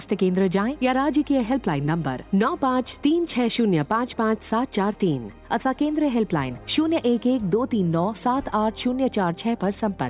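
Nothing stood out on listening; no technical fault could be heard anywhere in the recording.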